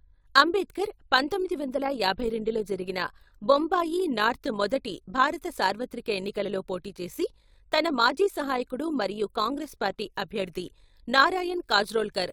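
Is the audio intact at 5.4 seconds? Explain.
No. At 5.4 seconds the speech carries overlap-add ripple, present across the whole clip: frames were resynthesised with an overlap that fails to sum to constant gain, so level swings by about 6 dB around 50 times a second, heard as a rough flutter.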